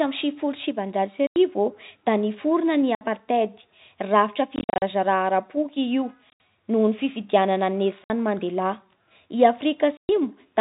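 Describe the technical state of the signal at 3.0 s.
At 3.0 s the speech falls into a 60 ms hole of packet loss filled with silence, from 2.95 to 3.01 s, which fits six lost 10 ms packets. The receiver played silence in its place, so the gap has hard edges. A fade or a codec's concealment would blur that gap.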